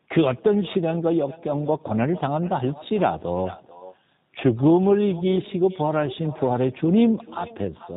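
From the first second to the end, the speech passes through a G.729 codec whose damage is plainly audible. The codec resynthesises each short frame from a vocal-tract filter, a pitch predictor and a few coded pulses, so nothing above 4 kHz survives and the voice turns slightly rough and buzzy, which fits an 8 kbit/s stream. Simple band-limiting would only sound muffled. This has a synthetic edge, which marks a model-based codec.

Also running throughout is echo with no canceller. At the far end the call plays on a loudspeaker, that microphone picks it up, and nothing subtracts it, so the talker's own speech returns after a round trip of roughly 400 ms, about 18 dB below the direct sound. The returning copy is thinner than the original. Room reverberation would smear each syllable into a continuous tail. Here a separate, distinct repeat arrives roughly 400 ms behind the speech, which places it in the call path and not in the talker's room.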